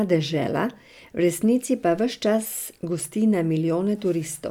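No technical faults can be heard anywhere in the speech recording.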